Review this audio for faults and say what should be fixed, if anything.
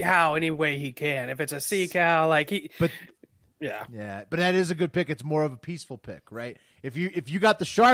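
Nothing to fix: no faults detected in the speech recording.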